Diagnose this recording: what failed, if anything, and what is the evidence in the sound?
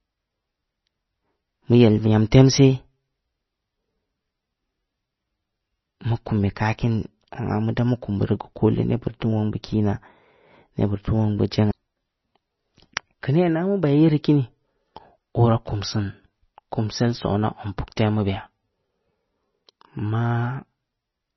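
The codec stage is the likely culprit: heavy MP3 compression across the whole recording. Starved of bits, the encoder discarded everything above 5.9 kHz, so the speech sounds dull and s sounds lose their edge. The remaining spectrum has a watery, swirling texture as weak frequency lines drop in and out between frames, and consonant onsets smear. The damage points to a very low bitrate, around 24 kbps.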